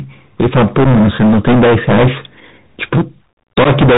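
From the first moment to the end, the speech is driven about 22 dB past what the signal path can carry, so hard clipping flattens the waveform tops on nearly a third of all samples. At that degree of overload the flattened peaks generate a dense spray of high harmonics. The result is not occasional crackle but a continuous harsh fuzz riding on every loud sound.

The whole clip also passes through the Bluetooth CVSD headset codec, which fits a 64 kbps link. CVSD sends a single up-or-down bit per sample and adapts its step size as it goes, so nothing above 4 kHz survives and the sound is narrowband and muffled. The clipped, steep-edged waveform outruns the adaptive step, adding a gritty slope-overload distortion. Sibilants come out scratchy, and a granular hiss sits under the speech throughout.

At 0.84 to 0.86 s there is unconcealed Bluetooth headset packet loss. About 7.5 ms of audio is missing, which fits two lost packets, and the gap is filled with silence or an idle pattern rather than patched over. 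It is heard as a brief abrupt dropout. A second loss falls at 3.64 to 3.67 s, with about 11 ms gone, consistent with three packets. This hole is slightly longer and is heard as a short gap with abrupt edges in the speech.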